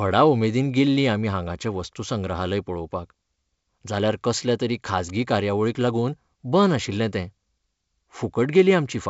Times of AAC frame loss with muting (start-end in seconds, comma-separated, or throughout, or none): none